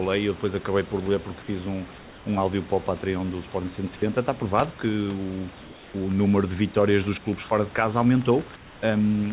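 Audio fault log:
1.98–2.26 s, 5.62–5.94 s and 8.56–8.82 s: comfort noise in place of the background. Each pause loses its room detail. A steady, featureless hiss about 1 to 4 dB quieter replaces it. The likely cause is discontinuous transmission with synthetic fill.
3.96–4.02 s: sound dropped by the voice detector. About 20 ms of speech vanishes into 60 ms of flat noise. The detector likely took that speech for background.
6.11–9.32 s: train of clicks. Similar sharp pulses tick about 7 times a second at an uneven pace. They are roughly as loud as the speech and continue through pauses. Likely from nearby interference or a faulty connection or power supply.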